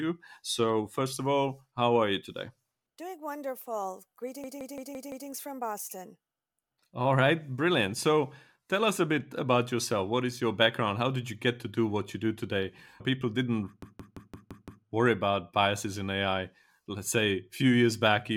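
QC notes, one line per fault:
4.44–5.29 s and 13.82–14.85 s, system hang loop: the playback path stalls while the hardware keeps replaying the same block of about 0.17 s, 5 times in the first event and 6 in the second, which fits an 8192-sample ring buffer. At 5.86 repeats per second, the speech becomes a machine-gun stutter rather than a buzz. Afterwards the speech resumes with essentially nothing missing. A waveform or spectrogram shows identical 0.17 s tiles repeating back to back.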